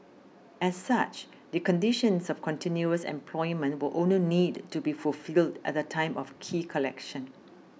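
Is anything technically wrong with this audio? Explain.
No, nothing technically wrong turns up anywhere in this speech recording.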